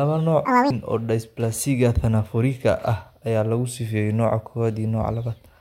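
Audio read two samples at a time (double speed) runs from 0.45 to 0.70 s. For this quarter-second stretch, the reader treats each pair of samples as a single frame, as if the stream had two channels or samples twice as wide, so it consumes the speech at 2.0 times the proper rate. The voice jumps an octave higher and hurries forward.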